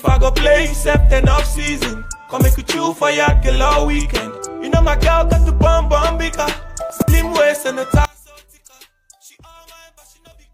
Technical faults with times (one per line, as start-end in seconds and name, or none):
6.90-7.08 chunks out of order
8.05-10.53 one channel inverted